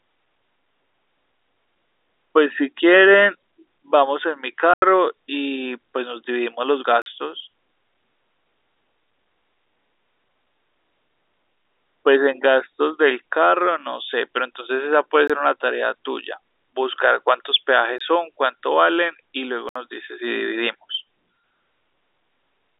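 Blocks of digital silence cut the speech out at 4.74 s (85 ms), 7.02 s (43 ms), 15.28 s and 17.98 s (21 ms each), and 19.69 s (64 ms). The block lengths suggest output buffers that weren't filled in time.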